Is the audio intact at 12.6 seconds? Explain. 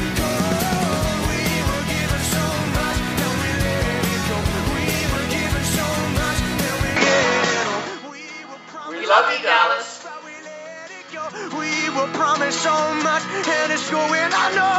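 No. From 6.96 s to the end of the clip, the sound has the character of an input switched to a poorer device, likely a change to a different microphone or capture path. Nothing above 7.6 kHz gets through, so the top end is cut off and the sound turns duller. The level shifts by roughly 5 dB, and a new background noise floor appears around 55 dB below the signal. There is no silence at the transition.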